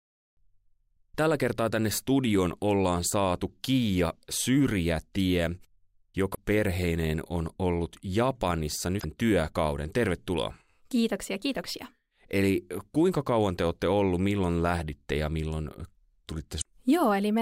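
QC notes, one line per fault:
6.31–6.38 s, 8.98–9.04 s, 16.58–16.66 s: damaged data in a compressed stream. Three brief glitches of about 70–80 ms each. The first comes just before "perheineen on ollut". Corrupt bytes make the decoder misread frames and hunt for the next header.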